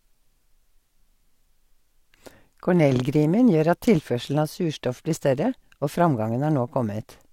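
Nothing stood out as a technical fault on listening to this speech recording.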